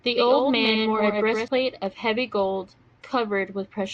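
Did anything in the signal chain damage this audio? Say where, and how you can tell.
Yes. A doubled audio track runs from the start until 1.48 s, where it stops abruptly. A full-band copy trails the speech by about a tenth of a second, roughly 5 dB quieter, with no decay or room colour. This likely comes from a second, slower capture path mixed in.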